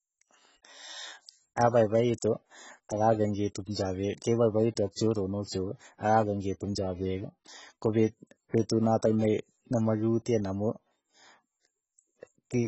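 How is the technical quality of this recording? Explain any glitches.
The technical quality is poor. Throughout the clip, the speech carries heavy AAC compression artefacts, most likely from an AAC-LC encode at a very low bitrate, around 16 kbps. To save bits, the encoder discards everything above 8 kHz and quantises the remaining bands coarsely, leaving the speech dull and smeared, with a warbling, fizzy texture on sibilants.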